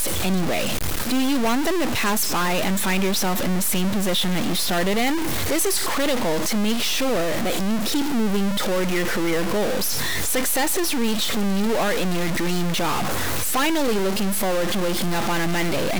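Harsh, buzzy grit runs through the whole speech clip and the pauses fill with noise, likely a stuck bit knocking samples off by about -20 dBFS.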